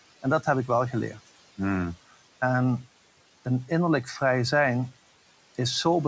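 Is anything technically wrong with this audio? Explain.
Yes, noise suppressor artifacts run throughout the clip. The suppressor lowers the room noise, which sits about 19 dB below the speech, by about 17 dB, so it sinks between phrases and returns under them. A gate would cut off outright instead.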